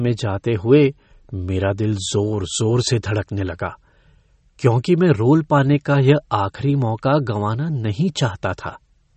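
From start to finish the speech has plainly audible damage of the kind left by MP3 compression, likely at a low bitrate on the order of 32 kbps. Nothing survives above 8.3 kHz, so a spectrogram shows a hard ceiling there, with patchy high-frequency detail beneath it flickering on and off from frame to frame. Starved of bits, the encoder zeroes weak components, giving a watery, swirling texture, metallic chirps on s sounds, and smeared onsets in the waveform.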